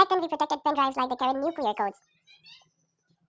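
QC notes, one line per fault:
Throughout: wrong sample rate. The audio is played back at twice the rate it was captured at, with no conversion, which fits 8 kHz material sent out at 16 kHz. The speech therefore runs at double speed and sits a full octave, 12 semitones, higher.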